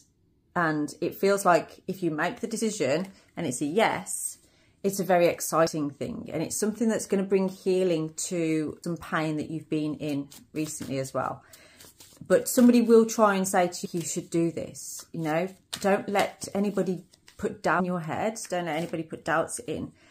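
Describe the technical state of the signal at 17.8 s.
A brief glitch cuts through the audio at 17.79 s, lasting about 16 ms. This is damaged data in a compressed stream: corrupted bytes make the decoder misread the frame there, lose sync and skip forward to the next valid frame header.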